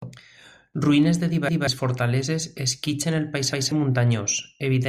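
At 1.49 s and again at 3.53 s, a 0.19 s piece of speech stutters, playing twice with a hard join. This is a repeated buffer: fresh audio arrived late, so the device replayed its last block, which fits an 8192-sample buffer, and roughly a fifth of a second of audio is lost each time.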